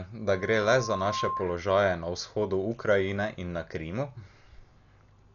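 Dull and band-limited from the first moment to the end, the speech has nothing above 7 kHz and carries a rough, fluttering noise around its tonal parts. This is likely Dolby Digital compression applied heavily, with the encoder narrowing the band and leaving many frequency lines without mantissa bits, so the decoder fills them with dither noise. The degree of damage points to a low bitrate in the region of 48 kbps.

From 0.31 s to 1.52 s, a single steady tone near 1.1 kHz swells out of the audio over about a second until it sits at roughly the same level as the speech, then stops. This is loudspeaker feedback squeal: a microphone was picking up the loudspeaker it fed, and at that one frequency the loop gain rose above one, so the tone kept reinforcing itself.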